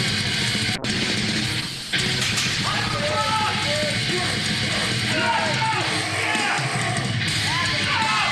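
From 0.76 to 3.24 s the sound turns rough and muffled: a call bitrate drop, consistent with the encoder falling from roughly 96 to 14 kbps.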